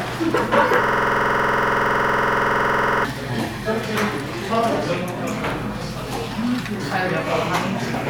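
From 0.84 s to 3.05 s the audio falls into a system hang loop. The host or driver stalled while the sound hardware kept replaying the same ring buffer, so a single 46.4 ms slice of sound repeats exactly, dozens of times over. At a repeat rate of 21.5 Hz it comes across as a hard, rapid rattling stutter with a buzzy edge. The loop length fits a 2048-sample buffer. Normal audio returns at 3.05 s.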